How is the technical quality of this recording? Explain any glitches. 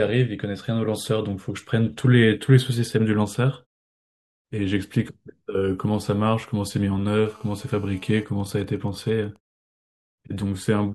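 The speech is marred late on by interference from a 2G phone sitting close to the recording gear.

GSM phone buzz, 7.26 to 8.24 s: the phone is on a call, transmitting 217 times a second, and the audio circuit rectifies those radio pulses into a hard, raspy 217 Hz buzz, about 29 dB below the speech.

GSM signalling bursts, 8.28 to 9.58 s: the caller goes quiet, so the phone sends only short burst groups, giving even ticks with a longer buzz twice a second, roughly 30 dB down.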